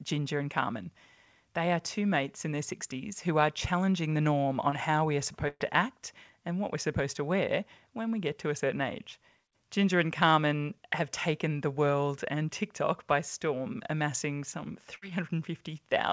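Short concealed packet loss at 4.70 to 4.74 s, right after "are challenging the norm": about 20 ms of the call arrived too late to decode, so the receiver extended the preceding sound across the hole and blended back in, leaving a brief smear before "how we are".

Burst of packet loss at 5.48 to 5.62 s, between "how we are" and "to act and what": roughly 120 ms was lost, and concealment stretched the last sound while fading it, ending in about 30 ms of silence before the audio resumes further on. A shorter burst follows at 14.96 to 15.04 s, just after "by storm amassing some", where about 60 ms is bridged the same way. Throughout, the audio stops at 8 kHz, which fits a G.722 call path.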